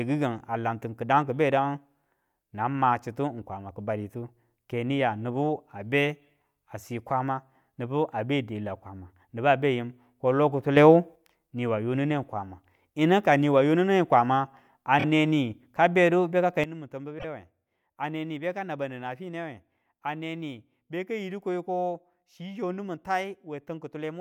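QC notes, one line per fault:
10.77–11.16 s, sudden gain jump: a gain setting was likely applied without a ramp, so sound and background noise rise together by about 6 dB, then drop back.
14.98–15.04 s, repeated frames: one 26.1 ms compressed frame was played two extra times, adding 52.2 ms and causing a brief stutter.
16.64 s to end, sudden gain jump: a gain change likely landed in a single step, dropping sound and noise together by about 12 dB for the remainder.
17.18–17.25 s, repeated frames: one 26.1 ms frame was played once more, adding 26.1 ms and producing a short stutter.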